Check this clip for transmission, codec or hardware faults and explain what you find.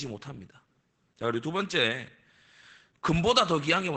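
One fault runs through the whole speech clip: Opus voice compression. The SILK linear-prediction coder, held to wideband, cuts everything above 8 kHz and codes the excitation coarsely. The result is muffled, hoarse, faintly robotic speech, which fits a bitrate around 12 kbps. The rough, buzzy voicing sets it apart from a simple low-pass filter, which would dull the sound without that texture.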